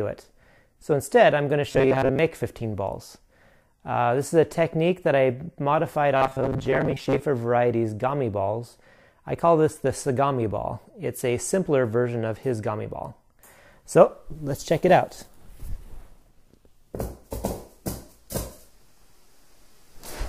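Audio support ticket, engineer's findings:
Robotic sound from repeated short buffers, 1.72–2.19 s and 6.17–7.23 s. Symptom: rigid metallic buzz locked at 134 Hz, loosely tracking the underlying sound. Likely cause: playback buffer starved, so the last ~7.5 ms block is looped while incoming audio is dropped. Loop period sets the fixed 134 Hz pitch. First span mostly repeated material; second span roughly half repeated.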